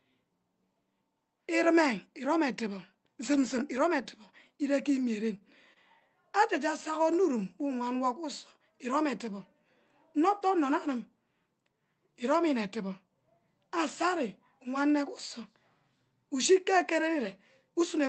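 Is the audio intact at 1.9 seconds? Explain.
Yes, the speech at 1.9 seconds is intact, with no dropout, click or other fault at that moment.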